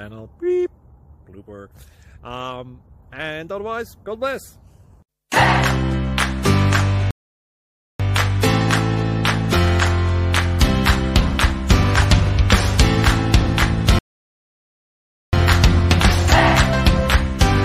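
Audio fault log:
7.11–8.00 s and 13.99–15.33 s, rebuffering stall: silence for 0.89 s and 1.34 s, then resumption exactly where it stopped, as the player ran out of downloaded audio and waited.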